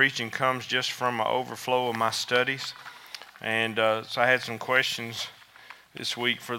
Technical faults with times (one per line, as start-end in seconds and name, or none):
none